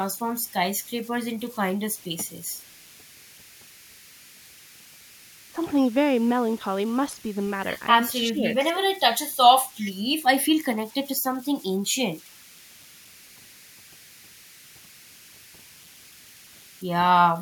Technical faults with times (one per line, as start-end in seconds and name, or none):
0.00-17.42 converter idle tones
1.35-1.52 echo leak
5.53-5.60 speech suppressed in double talk
8.28-8.82 speech suppressed in double talk
9.80-9.92 echo leak
11.35-11.44 echo leak